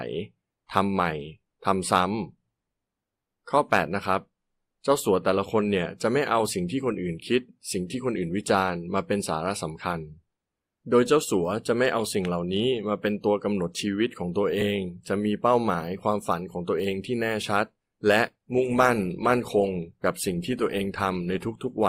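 Adaptive stream at a lower bitrate, from 18.33 s to the end at 21.89 s: the player switched to a leaner version of the stream, most plausibly because the connection slowed. The quality change is abrupt but seamless, with no gap. Codec artefacts rise in the speech, which fits an Opus stream stepping down from around 64 kbit/s to 24 kbit/s.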